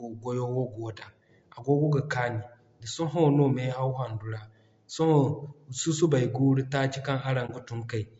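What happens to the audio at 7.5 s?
AAC frame loss with muting occurs from 7.46 to 7.51 s. A compressed frame of the stream failed to arrive, so the decoder substituted silence for its spectral content. Because each decoded block overlaps its neighbours, the sound fades down and back up instead of cutting off abruptly. The result is a brief, soft-edged dropout, about 30 ms of missing material, consistent with a single lost frame. The gap sounds like a brief dip.

Beneath that gap, and throughout the clip, the speech has a rough, grainy texture: noise fills the spaces between the voice's harmonics and the upper range sounds thinned and somewhat artificial. This is plainly audible and is the signature of low-delay AAC compression, likely AAC-ELD at around 32 kbps, where short analysis frames blur pitch detail and the limited bit budget starves the high band.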